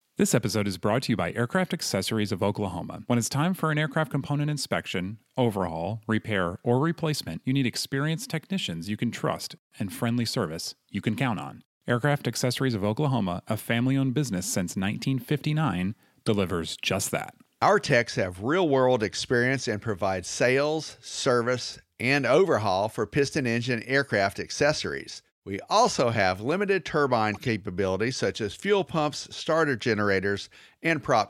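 At 16.26 to 16.29 s, just before "just that", and again at 27.34 to 27.48 s, after "also have limited turbine", a corrupt frame decoded produces a squeaky blip, then a longer, quieter burst. Damaged compressed frames were played anyway, putting energy at the wrong frequencies. On a spectrogram each shows as a brief vertical smear that ignores the speech harmonics, peaking near about -20 and -30 dBFS.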